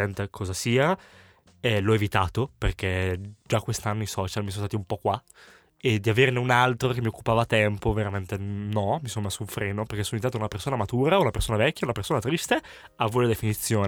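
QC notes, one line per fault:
No faults heard in this speech recording.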